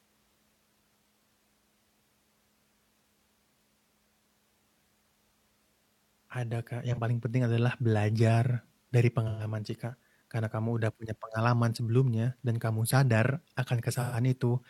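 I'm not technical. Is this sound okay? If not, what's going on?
No. The speech has three short glitches from AAC frame loss with concealment. Small chunks of the compressed audio went missing. The player guessed the gap from the sound just before it. Each spot sounds like a brief smeared, noisy patch. The first, at 6.92 to 6.98 s, lasts about 43 ms, which fits one lost chunk. The others, at 9.27 to 9.43 s and 13.94 to 14.17 s, run longer, about 128 ms each, from three lost chunks.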